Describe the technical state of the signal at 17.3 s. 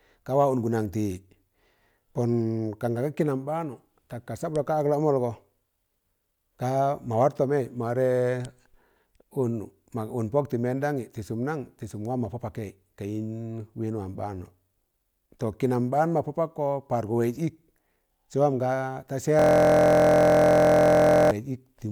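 At 17.3 s the signal is intact, with no technical fault audible at that moment.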